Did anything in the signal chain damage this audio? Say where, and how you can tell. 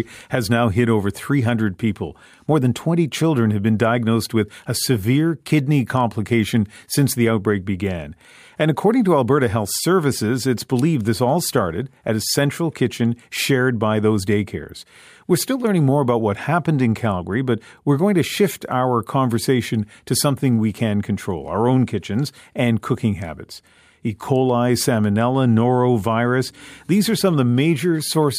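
No, nothing along the chain seems to have harmed this speech recording, and there's nothing I'd point to at any stage.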